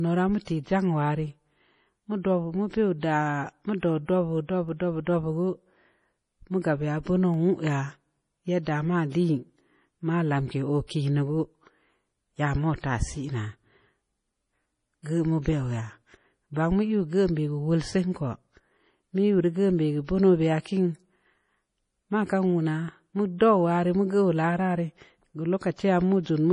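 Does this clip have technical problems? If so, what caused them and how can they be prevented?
Yes. MP3 compression damage runs through the whole speech recording. Weak frequency components flicker on and off between frames, giving a watery, swirly texture with metallic edges on the s sounds. The damage is heavy, which fits a very low bitrate of about 32 kbps as the likely cause. Encoding at a higher bitrate, or keeping the master in a lossless format, prevents this.

Pre-echo sits at 0.45 to 0.47 s, a hiss of about 25 ms just ahead of a sharp onset. The codec spread its quantisation noise evenly across a transform block, so noise scaled for the loud attack also filled the quiet gap before it, softening and smearing the onset. A higher bitrate, or an encoder that switches to short blocks on transients, prevents it.

Dropped samples appear as three isolated clicks, at 4.69 s, 7.34 s and 15.48 s. 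At each, the waveform jumps ahead by only a tiny fraction of a millisecond, far too little to remove any audible sound but enough to leave a sharp discontinuity that shows as a thin vertical line across the spectrum. The likely cause is brief buffer underruns during capture or playback. Larger buffers and a steady, uninterrupted audio path prevent them.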